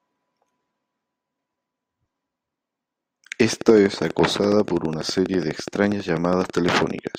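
A train of clicks runs from 3.53 s to 7.16 s: around fifty evenly spaced pulses at 12.2 per second, peaking a few decibels above the speech, ticking steadily through gaps too. Likely cause: interference from nearby equipment or a faulty connection or power supply.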